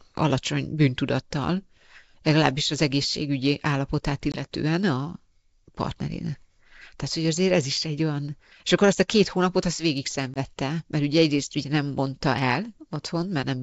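Packet loss on an ADPCM call at 4.32 s and 10.34 s: a hard-edged 20 ms silence, then slightly distorted speech while the decoder's predictor and step size resynchronise.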